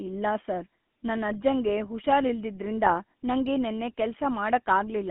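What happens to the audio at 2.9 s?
Between 2.84 and 2.94 s, right after "ಸರ್ ನನ್ ಅಜ್ಜಂಗೆ ಹುಷಾರಿಲ್ದಿದ್ರಿಂದ" and before "ನಂಗೆ ನೆನ್ನೆ", the speech breaks up with GSM bit errors. Corrupted filter, pitch and gain values reach the decoder, so for roughly 0.1 s the spectrum warps and the level jumps, giving a squawking, gargled burst. The span points to about three damaged 20 ms frames. On the waveform this shows as an abrupt amplitude spike or blocky jumps. The spectrogram shows smeared, misplaced formant bands and broadband streaks confined to those frames.

Underneath that burst, the whole clip carries the GSM full-rate codec sound. The codec rebuilds the voice from a vocal-tract model driven by regularly spaced pulses, which leaves a plainly audible buzzy, gravelly roughness. It runs at 13 kbps over a 200 to 3400 Hz line band. On the spectrogram, energy stops sharply near 3.4 kHz with nothing above, and the harmonics look coarse and grainy.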